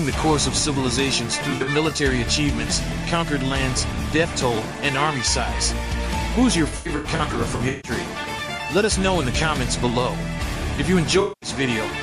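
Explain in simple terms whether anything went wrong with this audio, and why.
Yes: AAC frame loss with concealment, around 1.50, 6.68 to 7.91, and 11.20 to 11.49 s. The decoder patched the gaps with smeared, noisy guesses, worst in the long middle stretch.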